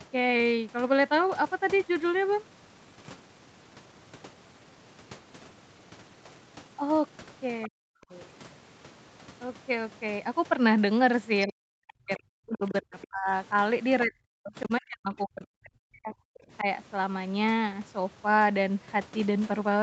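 At 7.67 to 8.13 s the speech drops out hard, by something like 40 dB at the deepest point. That's speech suppressed in double talk. The likely cause is the echo canceller hearing the far side come in at the same time, failing to tell the talker apart from the loudspeaker echo, and clamping down on everything. It happens again from 11.46 to 13.31 s and from 14.05 to 16.22 s, each time with pieces of the talker simply gone for a second or two. There's a much milder dip of about 5 dB from 16.60 to 16.66 s.

Inside that second stretch, the other side's voice is leaking through. Two short scraps come through, at 12.67 to 12.72 s and at 13.01 to 13.07 s. They're quiet, roughly 15 and 20 dB below the talker. That's most likely loudspeaker playback the canceller didn't fully remove from the mic, heard through the call's top end, which stops around 8 kHz.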